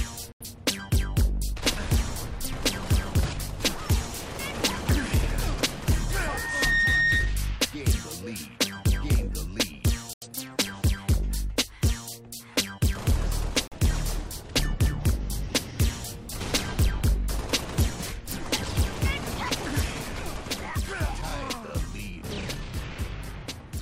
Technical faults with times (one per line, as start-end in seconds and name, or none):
0.32-0.45 digital broadcast dropout
6.09-7.38 loudspeaker feedback squeal
10.13-10.27 digital broadcast dropout
13.67-13.77 digital broadcast dropout